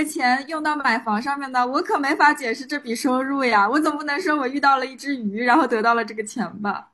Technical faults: overlap between stream segments

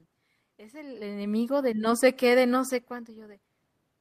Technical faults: automatic gain rising

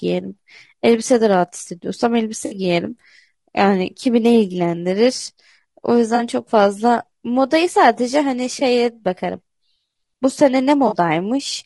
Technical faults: low-delay AAC compression; AAC frame loss with concealment

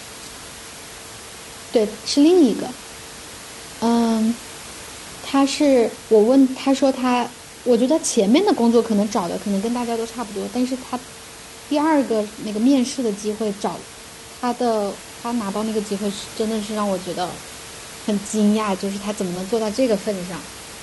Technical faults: none

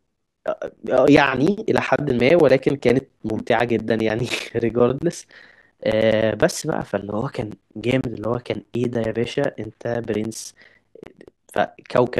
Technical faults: periodic USB or driver dropouts; gap between chunks

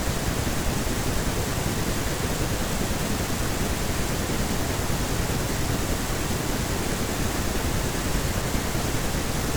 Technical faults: compressed frames skipped

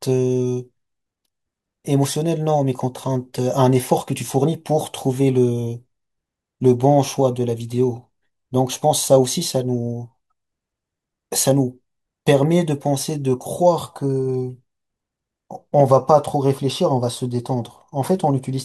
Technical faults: none

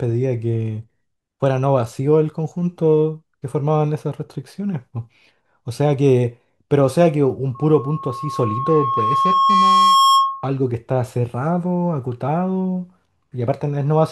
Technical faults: loudspeaker feedback squeal

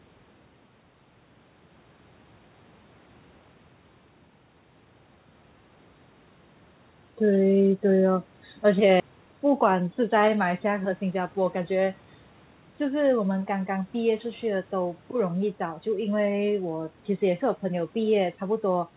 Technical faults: skip ahead; jitter buffer speed-up

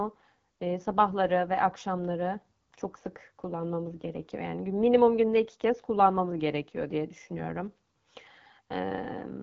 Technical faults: AMR wideband (HD Voice) codec

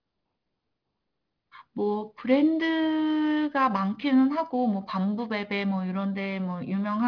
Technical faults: aliasing

